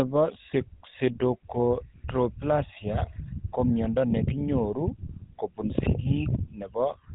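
Throughout the speech, the signal has passed through the GSM full-rate codec, which rebuilds the vocal tract from a sparse pulse excitation and discards everything above 4 kHz. The result is a dull, band-limited sound with a plainly audible buzzy, gravelly roughness, consistent with 13 kbps coding.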